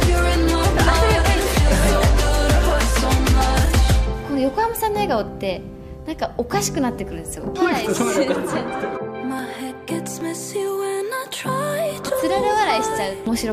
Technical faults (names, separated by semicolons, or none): dropped buffer (overrun)